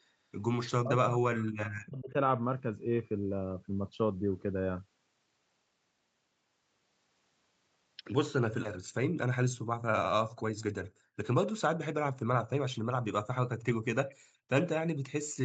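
From 0.65 to 2.15 s the talker's own speech sinks by as much as about 40 dB and breaks up, most likely speech suppressed in double talk. The canceller mistook near-end speech for loudspeaker echo while both sides spoke. Unlike background gating, the voice itself is what drops.

At 14.09 to 14.15 s a faint repeat, about 30 dB below the speech and trailing it by 232 ms, slips through. This is an echo leak, likely from an incompletely cancelled loudspeaker path. It is a distinct delayed copy rather than smeared room reverberation.

From 14.17 to 14.48 s the room sound collapses by up to about 40 dB and then returns. This is background gated by the echo canceller, clamping the microphone while the loudspeaker played. It differs from double-talk suppression because the ambient noise floor vanishes, not the speech.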